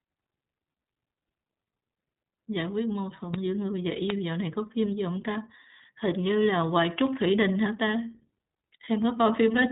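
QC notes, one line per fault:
throughout, iLBC codec: The speech has passed through the iLBC narrowband VoIP codec. Its frame-by-frame character fits 20 ms frames at around 15.2 kbps. Each frame's excitation is coded on its own, with no carry-over from the frame before, so the voice takes on a rough, faintly synthetic grain where fine detail should be. The damage is plainly audible, and the band stops at about 3.8 kHz, leaving the speech dull and boxed-in with no upper sibilance or air.
3.34 s, 4.10 s, 7.07 s, bit error spike: A flipped bit in memory or on a digital link has pushed sample values away by a power of two before they snap back. Each event is heard as one isolated, sharp tick spread across the whole spectrum, unrelated to the speech around it. The ticks at 3.34 s and 7.07 s are the briefest and sound like single corrupted samples. The one at 4.10 s lasts slightly longer, which points to about three consecutive samples hit.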